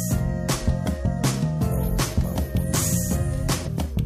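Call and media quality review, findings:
Damaged data in a compressed stream, 3.63 to 3.69 s. Corrupted bytes in the coded frames; the decoder misreads them, loses frame sync and hunts for the next valid header. Result: a brief glitch, about 60 ms, breaking the sound.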